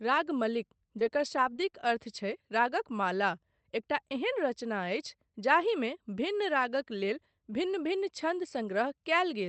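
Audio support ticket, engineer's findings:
Scattered short gaps, 0.99–1.9 s. Around five brief dropouts, longest roughly 20 ms, patched by extending the preceding sound. About 60 ms of real audio lost, heard as ticks and small smears. Probable component: jitter buffer / packet-loss concealment in the WebRTC call path.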